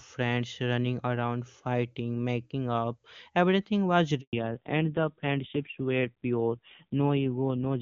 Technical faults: handover gap; fallback to narrowband

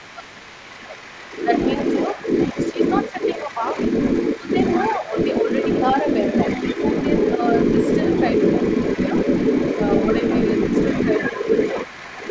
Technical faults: speech suppressed in double talk; other side's voice leaking through

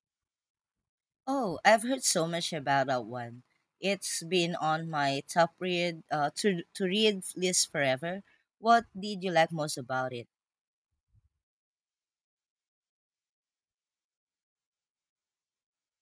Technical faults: none

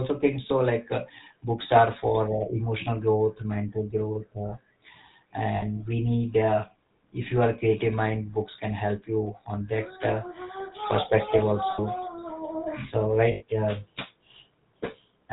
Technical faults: GSM full-rate codec; lost GSM frames

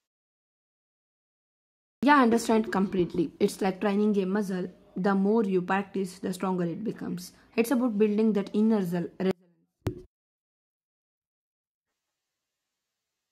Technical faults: clipped start after a pause; audio dropout to a faint residue

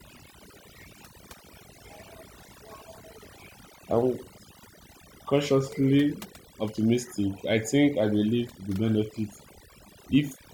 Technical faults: overdone noise removal

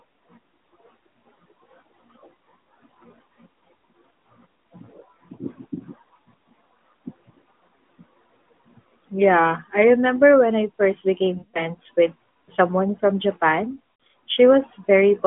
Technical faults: lost AMR speech frames

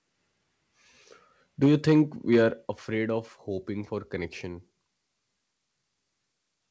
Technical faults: microphone overload; microphone volume stepped down

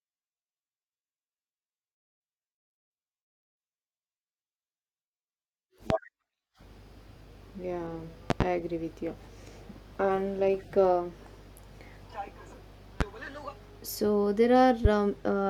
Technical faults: loud pop

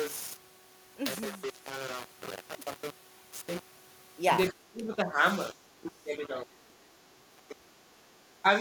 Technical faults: low bit depth without dither; speech suppressed in double talk

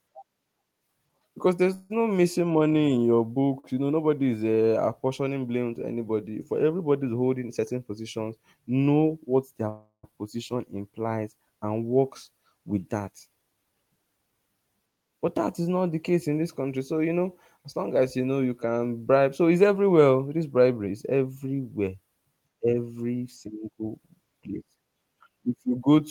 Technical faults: repeated stalls (stutter); call audio freeze; jitter buffer speed-up

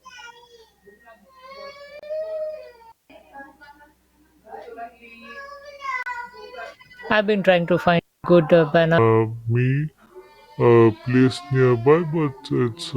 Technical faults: gap between stream segments; digital wireless dropout; section at the wrong speed

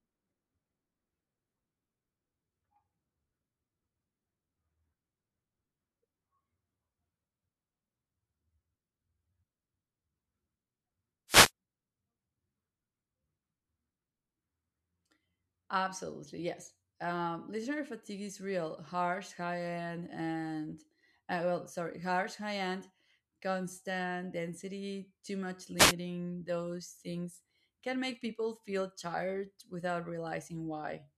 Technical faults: wireless microphone noise hit

